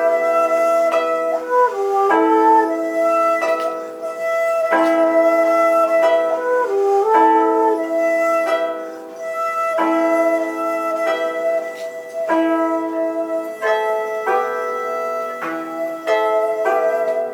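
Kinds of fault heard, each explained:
Nothing stood out on listening; the sound carries no audible fault at any point.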